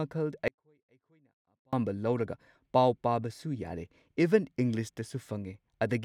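At 0.48 s the speech drops out abruptly and stays gone until 1.73 s, about 1.25 s in all. This is an audio dropout to a faint residue: the gap is not silent but holds a faint leak of the signal, roughly 35 dB below its normal level. The signal path after the break likely stayed live while the source feed was interrupted, so the speech cuts out and returns mid-flow rather than pausing or fading.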